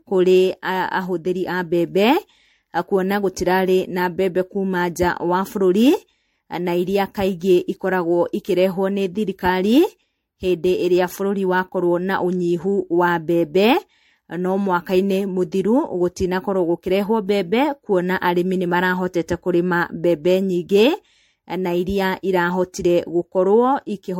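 Throughout, the speech sounds swirly, hollow and smeared, with blurred attacks and nothing above 16.5 kHz. This is generation loss, likely from about seven MP3 re-encodes near 65 kbit/s.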